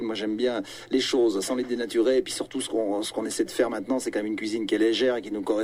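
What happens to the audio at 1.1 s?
Nothing goes wrong at 1.1 s: the audio plays through that moment intact, with no dropout, click or other fault.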